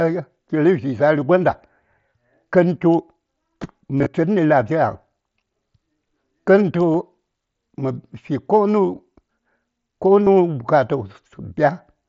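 Brief buzzy, held tones with a slight warble at 3.99–4.06 s, 6.94 s and 10.25 s are concealed Bluetooth headset packet loss: the receiver filled dropped packets by repeating recent waveform.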